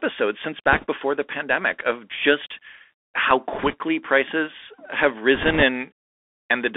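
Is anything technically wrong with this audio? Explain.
Yes. The whole clip has passed through a Bluetooth CVSD headset codec, a one-bit delta modulator with an adapting step, which fits a 64 kbps stream. Speech sits in a narrow 300 Hz to 3.5 kHz band, s sounds turn scratchy, and a granular hiss runs underneath.

Bit errors on a Bluetooth voice link appear at 0.72–0.85 s, just before "before the pandemic of"; at 3.53–3.74 s, between "pandemic of just how" and "prices have"; and at 5.35–5.63 s, right after "prices have". Around 1.5 to 2 percent of bits flip. Because every CVSD bit carries equal small weight and errors decay, these come through as a brief rushing crackle, not loud clicks.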